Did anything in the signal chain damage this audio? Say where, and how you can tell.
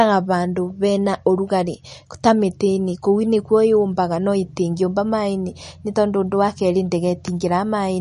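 Yes. MP3 compression throughout, at the codec stage: the speech has nothing above 10.6 kHz and sounds watery and swirly, likely a low-bitrate encode near 40 kbps starving weak frequency lines.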